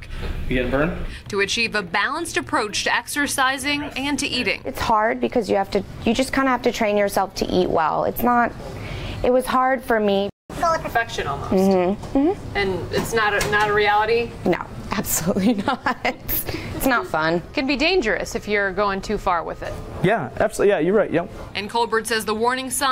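At 10.29 s the audio cuts out abruptly mid-flow and stays silent for about 0.2 s, resuming at 10.50 s where it left off. This is a playback stall, likely caused by the player running short of buffered data or its output thread being held up, so nothing reached the output until it recovered. From 10.50 s to 10.90 s the sound rushes and rises in pitch by roughly seven semitones before settling back. That is catch-up at higher speed: the player resamples its backlog at 1.5 times normal rate to recover the lost time, which raises speed and pitch together until the delay is cleared.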